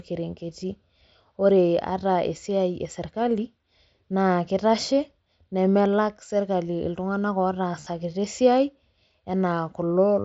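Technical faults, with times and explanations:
7.80 to 7.87 s and 9.89 s, concealed Bluetooth headset packet loss: short gaps in the headset link, scattered over 60 ms, then a single 15 ms loss, were filled by repeating recent waveform. This produces a brief buzzy tone with a small warble where the real audio returns. The spectrogram shows smeared, repeated harmonic stripes, and the waveform shows copied cycles.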